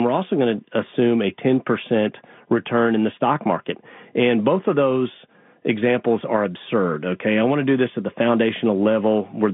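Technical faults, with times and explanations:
No technical faults are audible; the speech sits in a normal telephone band of roughly 150 Hz to 3.6 kHz with nothing above 3.8 kHz, as expected of G.711 telephone coding, and its coding damage is at most faint.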